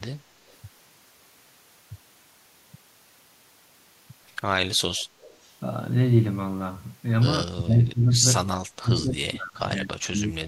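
From 5.00 to 5.05 s and again from 5.21 to 5.48 s, a faint, delayed copy of the speech trails the original by 197 ms, about 30 dB down. This is an echo leak, likely from a far-end loudspeaker whose echo canceller let residual pickup return.

Between 7.44 and 8.23 s, and from 8.71 s to the end, the speech sags and breaks up, dropping by about 25 dB and then about 35 dB. This is speech suppressed in double talk: the echo canceller likely mistook overlapping talk for echo and attenuated it.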